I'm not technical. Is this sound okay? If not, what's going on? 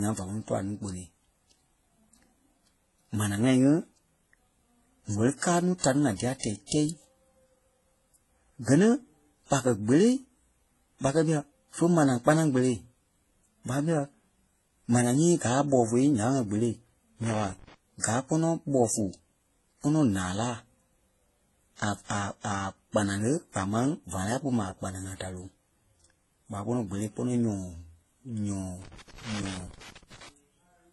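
No. The speech sounds dull and smeared all the way through, with nothing above about 11.7 kHz. The likely cause is transcoding between lossy codecs. The audio was squeezed by one compression format and then another, and each pass added its own blur.

There are also two bursts of loose connector crackle. The first runs from 17.24 to 17.74 s, just before "gaa kpɔnɔ". The second runs from 28.82 to 30.29 s. A worn or dirty plug kept cutting in and out, which made the scratchy crackle.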